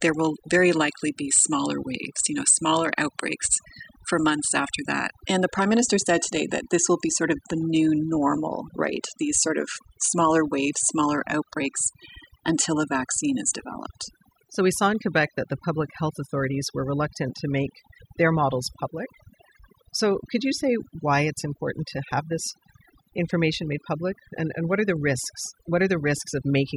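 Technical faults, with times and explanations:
Throughout: overdone noise removal. The background falls to near silence between phrases, broken by twinkling specks. A noise reduction stage has been pushed too hard. It cuts individual frequency bands deeply whenever their level sits close to its noise estimate. Quiet parts of the voice sit near that estimate too, so they are removed along with the noise. The isolated bands that survive flicker as chirps.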